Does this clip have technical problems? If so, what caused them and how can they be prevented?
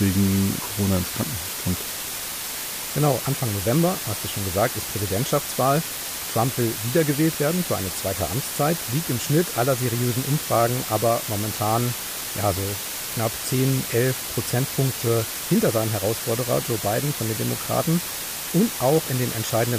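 Yes. Low bit depth with dither runs throughout: a 4-bit signal with dither yields steady hiss nearly as loud as the speech, a flat broadband floor on a spectrogram. Prevent it by recording and exporting at 16 or 24 bits.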